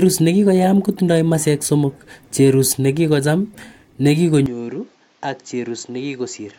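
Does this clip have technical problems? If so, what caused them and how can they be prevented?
Yes. At 4.46 s the recording system most likely switched its input to a poorer device, such as another microphone or a headset in call mode, with no silence at the changeover. From there to the end, the speech loses everything above 7.6 kHz and sounds duller and boxier. The level drops by around 10 dB, and a new, faint background noise appears well below the speech. To prevent it, lock the recording input to one device and disable automatic switching in the operating system.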